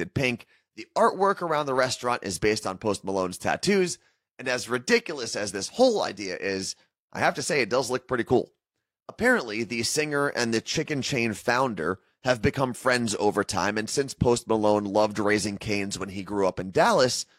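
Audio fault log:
Nothing stood out on listening to this speech recording.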